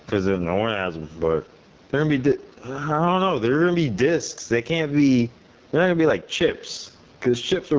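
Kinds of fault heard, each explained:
Gain pumping: Throughout the speech, the gain swings by roughly 10 dB, so levels sound squashed and breathing. The likely cause is microphone gain set far too high, with a fast limiter clamping every peak.
AMR wideband (HD Voice) codec: Throughout, the speech sounds rough, raspy and grainy, because the codec rebuilds it from a pulse-driven vocal tract model with shaped noise filling the top band. Damage this heavy fits the lowest AMR-WB rate, 6.6 kbit/s.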